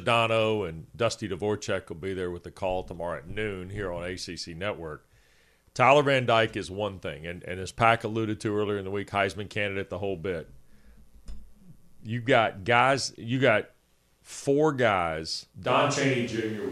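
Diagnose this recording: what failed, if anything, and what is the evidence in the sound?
At 15.67 s, right after "you got four guys", the speech suddenly turns roomy and hollow, with thinner bass and a background noise floor rising to roughly 30 dB below the speech. The overall level barely changes, and the sound stays this way to the end. This points to a switch to a distant microphone at the capture stage, most likely because the close microphone's feed failed or dropped out and a farther pickup took over.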